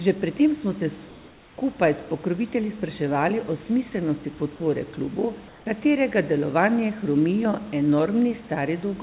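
At 3.9 s and again at 4.38 s, the speech briefly drops out for about 20 ms. Each time, roughly 10 ms of real sound is lost and a short patch of flat, steady noise takes its place before the speech returns. This is sound dropped by the voice detector. The sender's detector likely mistook quiet speech or a word ending for background and stopped sending, so the receiver filled in.

From 5.48 to 5.66 s, the room background is replaced by comfort noise for 180 ms. The real background sits about 27 dB below the loud parts of the speech and has some texture. The stretch that replaces it is smooth and featureless, and about 2 dB quieter. The likely cause is discontinuous transmission: the sender went silent during a pause, and the receiver synthesised noise shaped roughly like the room. The real background returns when the sound resumes.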